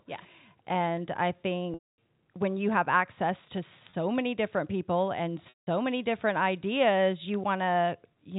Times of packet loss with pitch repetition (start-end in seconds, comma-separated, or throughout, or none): 1.74-1.98, 3.90-3.93, 5.49-5.67